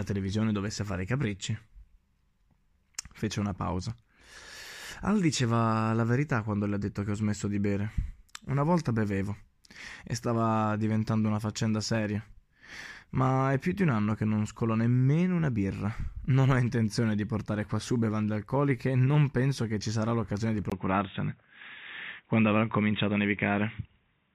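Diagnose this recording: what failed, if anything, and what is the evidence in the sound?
At 20.70 s, after a 20 ms gap, the speech turns boxy with nothing above 3.8 kHz, a few dB level shift and fresh hiss. That's likely an input switched to a poorer device at the driver level.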